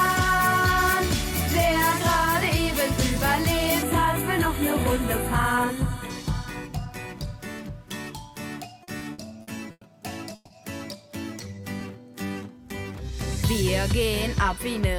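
From 3.82 to 6.10 s you get channel delay, which is comb filtering. One side arrives a tiny fraction late, just a few samples, about a tenth of a millisecond, and when the two are folded to mono the shared content cancels at evenly spaced frequencies. With a gap that short the first notch sits high, somewhere around 5 kHz, so the sound goes a bit hollow and dull up top for those couple of seconds.

Between 8.83 and 9.84 s there are repeated stalls, a stutter. Packets kept turning up late, the jitter buffer ran dry five separate times, and each time the receiver stretched the last bit of sound to cover the hole. That adds up to about 260 ms of filler in roughly a second, so about a quarter of that stretch is concealment. The longest wait is 100 ms. Nothing actually drops out, but the audio drags and hiccups.

At 10.35 to 10.53 s there's a call audio freeze. The sound hangs on its last moment as a short buzzy smear for about 150 ms, then carries on exactly where it stopped, with no silence and nothing lost. 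The likely cause is packets held up in transit long enough to empty the buffer, which pushes everything after it about 150 ms later.

From 11.30 to 12.94 s the jitter buffer slows things down to rebuild its reserve. It repeats single pitch periods and slivers of pauses over and over, inserting about 198 ms in total, so that stretch plays at roughly 88% speed. The pitch doesn't change, but the sound is drawn out.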